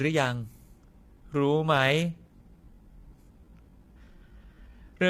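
From the start, the speech sounds rough and grainy, with noise between the harmonics and a thin top band. This is likely low-delay AAC compression, at a rate that fits about 32 kbps. From 1.02 s to the end, the pace suddenly drops to 0.72 times normal while the pitch holds. The audio drags, which likely points to a time-stretched section.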